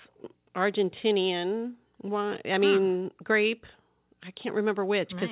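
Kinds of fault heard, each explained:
No faults can be heard in the speech, whose band stops at 4 kHz as expected for a WebRTC call path using G.711 mu-law, with the lowest bass trimmed by the call microphone processing.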